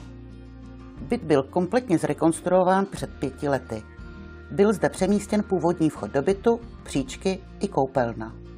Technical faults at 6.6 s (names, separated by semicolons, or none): none